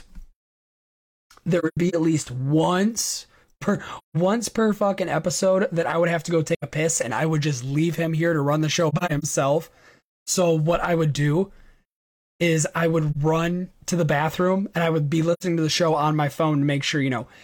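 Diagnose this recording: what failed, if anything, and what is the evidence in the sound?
AAC frame loss with muting, a codec fault, leaves soft-edged dropouts at 1.59–1.95, 3.98–4.17, 6.54–6.64, 8.89–9.24, 13.11–13.16 and 15.33–15.43 s. The decoder zeroed lost frames, and the overlapping windows fade the sound out and back in.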